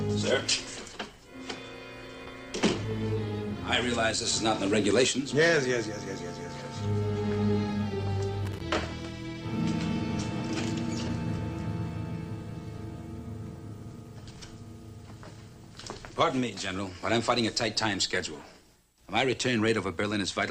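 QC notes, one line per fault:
8.45–8.61 s, loose connector crackle: a worn or dirty contact briefly made and broke, chopping the signal into an irregular burst of scratchy crackle lasting about 0.16 s.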